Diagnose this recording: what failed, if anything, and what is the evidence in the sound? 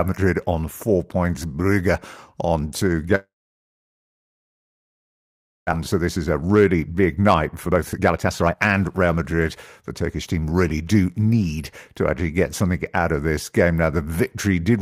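The network stage most likely lost the packet stream for a long stretch, a long network dropout. Just after "on two", at 3.15 s, the receiver's concealment stretches the last sound into a fading buzz that decays within a few tenths of a second. Silence then fills most of the gap to 5.75 s, about 2.4 s in all. When the audio returns, about 1.6 s of the sound is gone for good, and the late arrivals have left roughly a second of extra delay.

The buffer stage then runs a jitter buffer speed-up. The delayed packets arrived in a burst, so the buffer held far more than its target. The receiver drained the excess by repeatedly cutting out pieces one or a few pitch periods long. From 5.98 s to 10.27 s, ending just before "team really do need", the speech runs about 21% fast (121% speed) at unchanged pitch and sounds hurried. About a second of audio is trimmed away in total.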